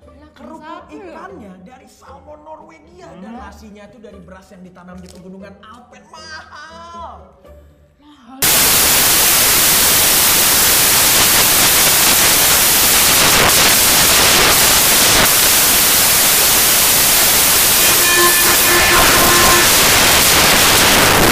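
Samples built from the wrong bytes begin at 8.42 s and last to the end. Each sample's bytes are assembled in the wrong order or at a shifted position, so the rapidly changing low-order bits dominate every value. The result is loud, harsh broadband noise, close to white on loud sounds.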